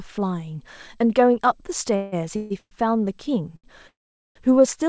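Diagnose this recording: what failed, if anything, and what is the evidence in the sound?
Network stage, call audio freeze at 1.96–2.14, 2.36–2.52, 2.58–2.73 and 3.88–4.37 s: sound smears into a fading buzz, mostly silent in the longest. Likely jitter buffer underrun.

Also network, a short stall from a late packet at 3.56–3.66 s: the G.722 call's jitter buffer stretches the held sound 73 ms, then picks up where it left off.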